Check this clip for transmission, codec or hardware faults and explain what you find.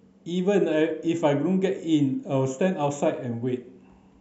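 No transmission, codec or hardware faults.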